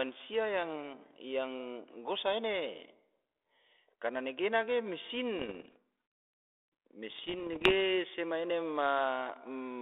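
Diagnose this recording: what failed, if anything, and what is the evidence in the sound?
Bit errors on the ADPCM link, a transmission fault. Pops and rough bursts with brief level jumps run 5.39 to 5.76 s, after "karna negena ge", and 7.10 to 7.73 s, before "sema ena". Each flipped bit upsets the decoder's step size and predictor. The damage rings on briefly.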